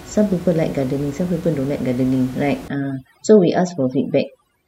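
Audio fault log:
2.68–4.67 s, overdone noise removal: from 2.68 s to the end, the room noise that sat about 19 dB below the speech drops to near silence dotted with twinkling specks. A noise reducer set too strong is switching off single frequency bands whenever they come near its noise estimate, and the quieter parts of the speech go with them. The change from background noise to specks marks it apart from codec swirl.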